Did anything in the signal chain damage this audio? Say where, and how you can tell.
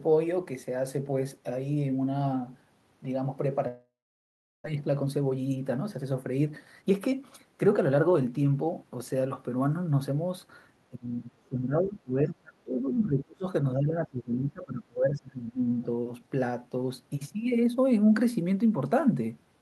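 Yes. Network stage: a long network dropout, likely, from 3.67 to 4.68 s; the sound decays into a fading buzz, then about 0.74 s of silence, and about 0.6 s never returns.

Buffer stage: a jitter buffer speed-up from 4.75 to 9.22 s. Pitch-period cuts play the speech about 8% faster at unchanged pitch, trimming roughly 0.4 s.

Call processing: speech suppressed in double talk, at 10.91 to 13.47 s and 13.73 to 15.69 s. The speech dips by up to about 25 dB, likely from the echo canceller muting during overlap.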